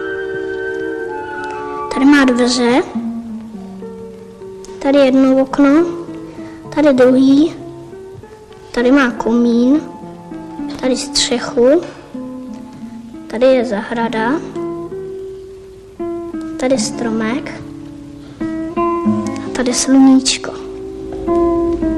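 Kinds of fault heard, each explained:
No technical fault can be heard in this audio. Nothing in the sound stands out as a problem at any point.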